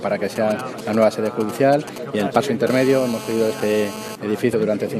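From 0.36 to 2.69 s, GSM signalling bursts from a nearby phone are rectified by the audio circuit, giving a galloping dit-dit-dit of short buzzes at 217 Hz, around 10 dB below the signal. On a spectrogram these show as intermittent vertical columns of harmonics.

At 0.72 to 0.78 s, compressed frames are skipped: roughly 40 ms of audio is lost and playback jumps ahead.

From 2.70 to 4.16 s, the phone is on a call, and steady GSM phone buzz appears as a hard, raspy 217 Hz tone about 12 dB below the signal. On a spectrogram it forms unbroken horizontal harmonic lines spaced 217 Hz apart.

At 4.52 s, another compressed-frame skip drops around 70 ms of audio, producing a jump that shows as a seam in the waveform.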